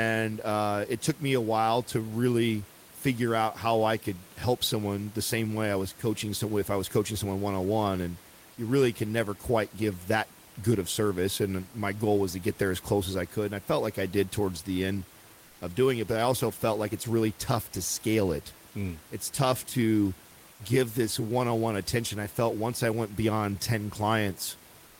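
At 15.47 s, just after "did towards the end", the sender likely paused transmission during a brief gap in the speech, and the receiver filled the silence with comfort noise in place of the background. For about 140 ms, until 15.61 s and the words "of doing it but", the room noise, which sits about 27 dB below the speech, gives way to a smooth, featureless hiss about 2 dB quieter, then the real ambience returns.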